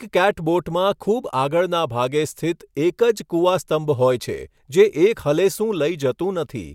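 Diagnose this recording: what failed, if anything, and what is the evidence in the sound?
Nothing failed in this recording, and the sound gives no evidence of a fault at any stage.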